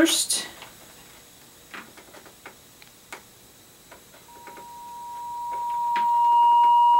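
Loudspeaker feedback squeal begins at 4.28 s and runs to the end at 7.00 s: a 952 Hz tone swells over roughly two seconds to about 15 dB above the sound, because the microphone re-amplifies its own loudspeaker output and at that frequency the loop gain exceeds one.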